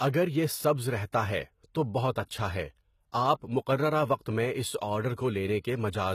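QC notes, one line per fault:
Throughout: HE-AAC compression. The damage is plainly audible. The speech treble sounds bright but synthetic, and s sounds turn gritty and lispy. Nothing is heard above 14.9 kHz. This likely comes from treble rebuilt by copying lower bands upward, consistent with a bitrate near 20 kbps.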